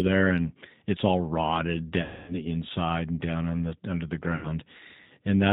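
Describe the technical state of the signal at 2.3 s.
At 2.3 s the signal is inside a stretch of VoIP packet loss concealed by the speech codec, running from about 2.02 s to 2.36 s, between "and it's all rotted" and "the inside and down". Roughly a quarter second of packets is missing, and the decoder fills the hole by carrying forward its last pitch and vocal tract settings with the gain stepped down frame by frame. The result is a smeared, buzzy prolongation that sags in level. A plain dropout would fall to silence or click. Here the sound keeps going as a droning echo of the last syllable, and it stays weak for a moment after real packets resume.

Underneath, the G.729 codec is plainly audible across the whole clip at 8 kbit/s. Each 10 ms frame is rebuilt from a filter, a pitch predictor and a handful of pulses, and nothing above 4 kHz survives. Unlike simple band-limiting, this adds a rough, slightly synthetic grain to the voice itself.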